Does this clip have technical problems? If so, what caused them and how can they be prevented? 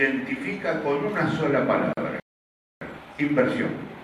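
Yes. A gap at a join of encoded pieces at 1.93 to 1.97 s drops out for about 42 ms, where separately encoded segments were joined with their silent encoder delay and final-frame padding left in. Trimming each segment's encoder delay and padding before joining, or encoding the material as one continuous stream, prevents it.

A playback stall at 2.20 to 2.81 s silences the sound for about 614 ms mid-flow, likely because the player ran out of buffered data or its thread was blocked. A larger playback buffer and keeping audio work off contended threads prevent it.

Time-compressed catch-up runs from 2.81 s to the end, hurrying the audio to 1.1 times normal speed at unchanged pitch while small pieces are cut and cross-faded to clear the backlog. Avoiding the stall removes the need to catch up, or the player can resume at normal speed instead.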